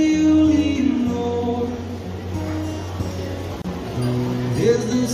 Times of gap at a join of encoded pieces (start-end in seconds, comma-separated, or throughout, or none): 3.62-3.64